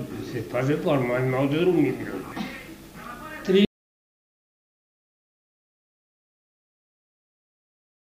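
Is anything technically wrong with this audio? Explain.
Yes, there are two faults. At 2.32 s, damaged data in the compressed stream produces a brief glitch lasting only a few milliseconds. Corrupted bytes make the decoder misread a frame, lose sync and hunt for the next valid header.

From 3.65 s to the end, there is an audio dropout to silence: the sound cuts off mid-flow and never returns. The gap is silent with no room tone, which separates it from a quiet passage or a fade. The likely cause is a lost input, such as a disconnected device or failed link, while recording continued.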